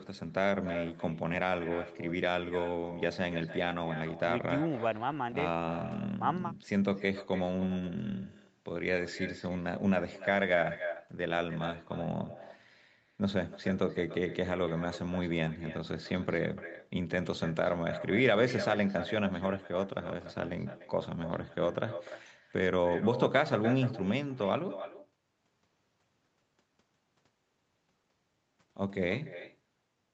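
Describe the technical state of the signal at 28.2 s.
At 28.2 s you're hearing the same echo with no canceller that runs through the whole recording. The far end is playing the call out of a loudspeaker, its mic picks it back up, and nothing strips that out, so the speech returns after the network round trip, roughly a third of a second late and about 12 dB down. It sounds thinner than the original, trailing each phrase. Everything stays band-limited to around 8 kHz, as expected for this call path.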